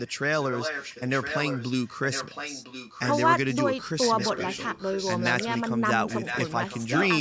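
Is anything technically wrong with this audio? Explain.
Yes, there's an echo leak running through the speech. A faint-to-fairly-strong copy of the speech trails about 1.01 s behind at 0.0–0.13, 0.33–3.25, 4.01–5.61 and 6.08–7.08 s. It's quietest at the start and loudest near the end. The likely cause is a speakerphone whose echo canceller let its own playback slip back into the microphone.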